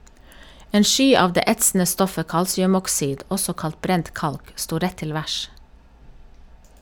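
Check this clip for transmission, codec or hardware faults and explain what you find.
No transmission, codec or hardware fault is audible anywhere in the speech.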